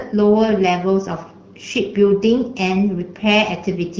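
No technical faults can be heard anywhere in this speech clip, which carries the light coloration typical of the AMR wideband (HD Voice) codec at 12.65 kbit/s.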